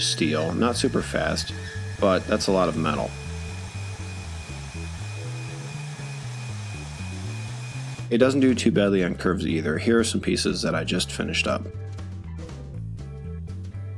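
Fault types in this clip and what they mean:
No technical faults can be heard in the signal: the level holds steady, the band is consistent, and there are no breaks, clicks or other disturbances anywhere in the audio.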